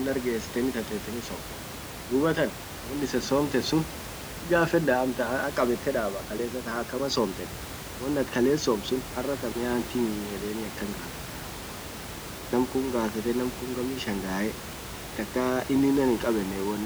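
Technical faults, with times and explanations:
No technical faults are present; the room noise, at about 11 dB below the speech, belongs to the recording itself.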